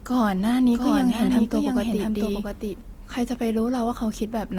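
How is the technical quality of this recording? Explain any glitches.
The recording has two clear technical problems. Coding damage runs through the whole clip, and a second copy of the audio overlaps part of it.

Opus compression: From start to finish the speech sounds grainy and rough. It is plainly audible. The likely cause is Opus in its music-oriented mode, and the damage fits a low rate near 24 kbps. The band stays full, reaching about 20.1 kHz. When bits run short, this mode fills bands with folded or noisy content instead of leaving gaps. That turns clean tones coarse rather than swirly.

Doubled audio track: From 0.75 s to 2.81 s, a second copy of the speech plays under the first. It trails by around 0.7 s and sits about 5 dB quieter. This likely comes from the audio being captured twice through a slower path, or from an edit holding two offset copies. The echo has no room tail or colouring. 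It begins and ends abruptly.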